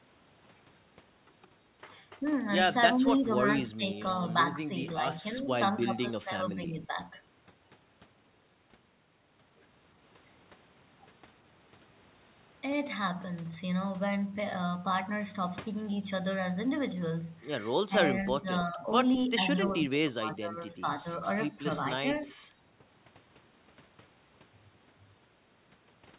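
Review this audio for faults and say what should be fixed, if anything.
Speech suppressed in double talk occurs at 2.9–4.06 s, 4.68–6.98 s, 17.84–18.87 s, 19.28–21.05 s, 21.56–21.62 s and 22.01–22.33 s. The voice dips in patches, by as much as about 20 dB around 19–21 s. The likely cause is the echo canceller treating overlapping far-end talk as echo and attenuating both sides. To prevent it, improve the canceller's double-talk detection so near-end speech passes untouched while both parties speak.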